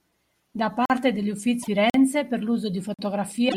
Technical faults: gap between chunks; broken MP3 bit reservoir

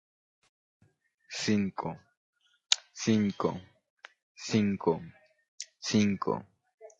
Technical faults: low-delay AAC compression; AAC frame loss with concealment

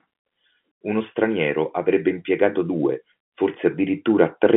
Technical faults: none

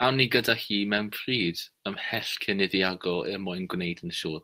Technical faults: lost packet rebuilt from error correction

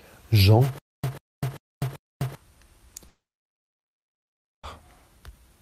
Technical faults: stutter with silent gaps; long network dropout

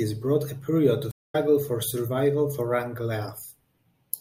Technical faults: stream reconnect

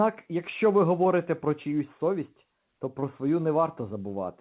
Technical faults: short concealed packet loss

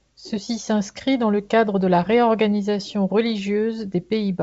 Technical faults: none

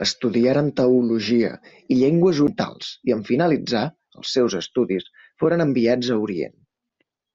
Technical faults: CD skip

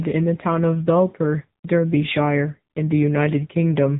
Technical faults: AMR narrowband mobile codec

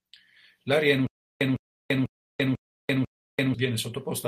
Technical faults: stutter with silent gaps; lost packet rebuilt from error correction

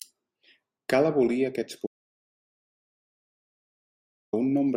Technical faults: audio dropout to silence

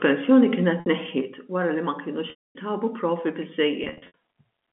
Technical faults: packet loss with pitch repetition

